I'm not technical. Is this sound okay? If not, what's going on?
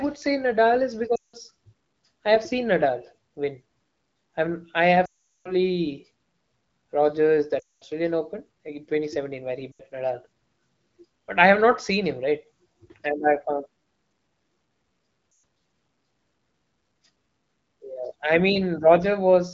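No. There are lost AMR speech frames at 1.15–1.36, 5.05–5.54, 7.60–7.84, 9.72–9.82 and 15.31–15.43 s. The phone repeats the last sound, which fades out, longest at 5.05 s.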